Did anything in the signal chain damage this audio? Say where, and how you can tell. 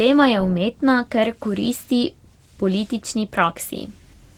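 Yes, at the codec stage: Opus voice compression throughout, with plainly audible coarse-excitation damage from hybrid SILK-plus-CELT coding, consistent with 16 kbps despite the band reaching 20.1 kHz.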